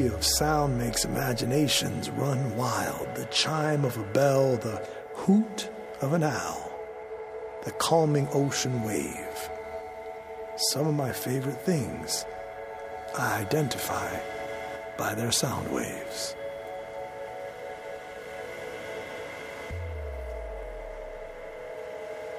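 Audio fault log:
Nothing in this one calls for a log entry; it's all good listening.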